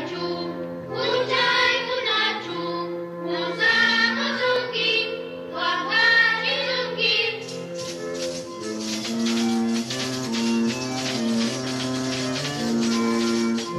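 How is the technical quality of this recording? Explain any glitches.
There is one audible glitch. A block of digital silence occurs at 4.56 s: for about 0.43 ms the samples drop straight to zero and then return, with no fade on either side. The abrupt jumps at both edges merge into a single short tick.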